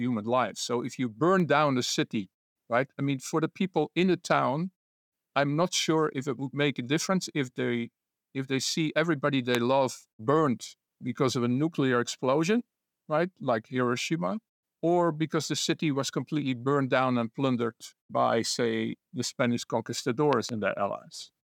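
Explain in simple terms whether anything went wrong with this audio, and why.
At 1.40 s, between "if you" and "down a city right", there is a tiny tick where the speech drops out for a fraction of a millisecond. This is a block of digital silence: most likely the program failed to supply sound in time, leaving a brief gap of nothing.

Three loud pops sit on top of the speech, which continues underneath. A single sharp pop comes at 9.55 to 9.57 s, between "if they see everybody" and "love burned because of", and a quick double pop follows at 20.33 to 20.51 s. The likely cause is a sudden electrical jolt, such as a plug, a switch or static.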